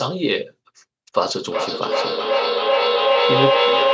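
From 1.44 s to the end, the speech runs into a feedback echo between two devices: a second device in the room replays the call and its microphone sends it back, beyond the reach of either echo canceller. Each sound returns roughly every 0.4 s, thinner and ringing, and the repeats build up to about 4 dB above the speech. The waveform shows stacked, evenly spaced copies, and the spectrogram shows smeared, repeating bands below the 8 kHz limit of the call's microphone processing.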